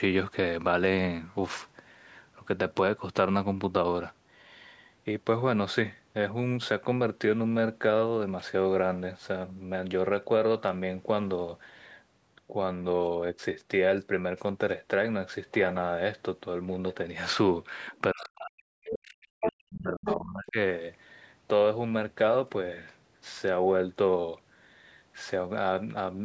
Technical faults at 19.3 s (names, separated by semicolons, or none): speech suppressed in double talk